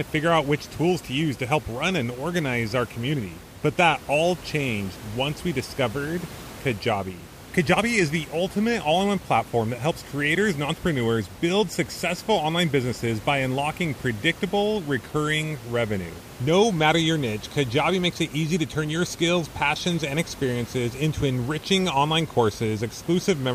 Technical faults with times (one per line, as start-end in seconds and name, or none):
none